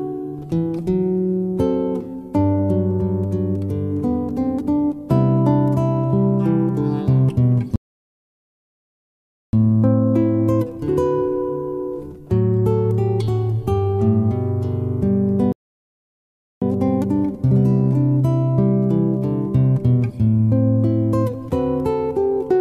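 At 7.76 s and again at 15.52 s the sound halts in a rebuffering stall: playback starved for downloaded audio, fell silent for 1.77 s and 1.09 s, then resumed exactly where it stopped. Waveform and spectrogram show flat, empty gaps with no missing material either side.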